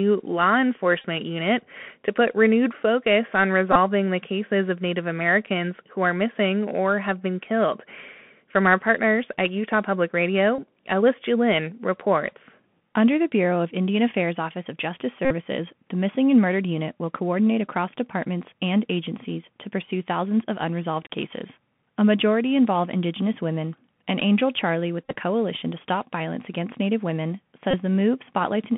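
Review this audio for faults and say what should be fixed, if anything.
Bluetooth CVSD headset codec runs through the whole speech clip. The sound is squeezed into a telephone band of 150 to 3400 Hz. A one-bit delta coder, consistent with a 64 kbps link, cannot track fast loud rises, so sibilants sound scratchy over a grainy hiss floor. Using a wideband headset profile such as mSBC or LC3, or recording on a wired microphone, would prevent it.

Bluetooth headset packet repeated occurs at 1.02–1.05 s, 3.72–3.77 s, 10.56–10.60 s, 15.25–15.34 s, 25.04–25.15 s and 27.71–27.76 s. Lost voice packets were replaced by re-decoding the previous packet's bits. At 3.75 ms per repeat this produces a short buzz near 267 Hz. The longest events, at 15.25 s and 25.04 s, cover about 53 ms and 68 ms of lost audio. The 25.04 s event is scattered across about 113 ms, with its longest unbroken run around 15 ms. 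A cleaner radio path would prevent it: keep the headset closer to the phone, away from 2.4 GHz interference, or avoid the wireless link entirely.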